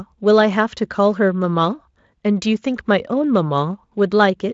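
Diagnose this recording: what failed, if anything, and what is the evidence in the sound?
Nothing stood out on listening to this speech recording, which carries no content above roughly 7.7 kHz, consistent with a Speex path running at a high setting.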